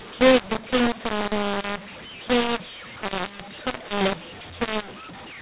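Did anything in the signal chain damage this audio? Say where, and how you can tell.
Yes: a mu-law and A-law mix-up at the codec decode stage. A-law G.711 speech decoded as mu-law scrambles levels throughout, giving harsh distortion and noise-filled pauses.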